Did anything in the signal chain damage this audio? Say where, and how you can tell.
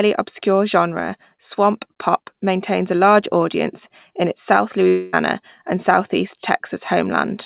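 Yes, at the network stage: from 4.88 to 5.15 s, after "audience in its south", the sound turns into a fading concealment buzz, likely a long network dropout that lost 240 ms.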